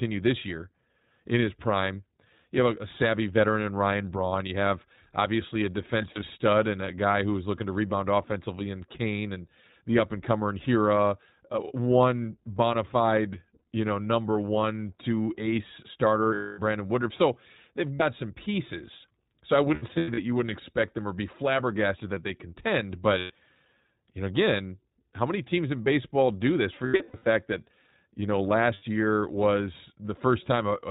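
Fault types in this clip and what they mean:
iLBC codec: A narrowband VoIP codec heard across the whole speech clip. Nothing above 4 kHz gets through, so the sound is dull and band-limited, and its damage is plainly audible as a rough, slightly synthetic grain. The character fits iLBC's 15.2 kbps mode with 20 ms frames. Unlike a plain telephone filter, it adds coding roughness, not just a lost top end.
lost iLBC frames: Missing packets at 6.02, 13.58, 16.34, 17.94, 19.74, 23.18, 26.86 and 28.74 s. The decoder fills each gap by repeating the last pitch cycle with noise, giving a short held, buzzy vowel of about 40 to 300 ms. At 6.02, 19.74 and 26.86 s the losses are scattered, with runs up to about a tenth of a second. Unlike a dropout, the gap is never silent, and the speech recovers almost at once.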